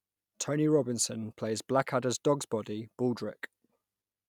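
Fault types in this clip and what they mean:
Nothing stood out on listening to this speech recording.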